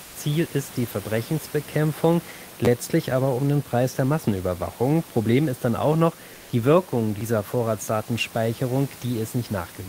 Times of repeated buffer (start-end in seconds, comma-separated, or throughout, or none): 2.65-2.67